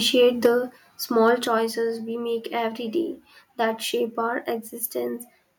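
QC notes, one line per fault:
0.46 s and 1.47 s, microphone volume stepped down. The speech and the room behind it drop in level at once, by about 3 dB at 0.46 s and about 4 dB at 1.47 s. Each drop lands in a single step, with no fade. The likely cause is the call software cutting the microphone's input volume after judging it too hot. Both the speech and the background sit lower from each point onward.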